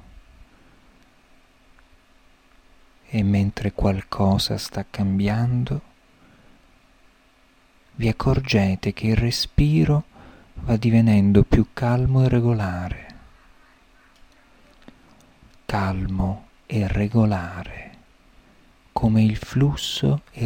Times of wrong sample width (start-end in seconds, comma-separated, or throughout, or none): none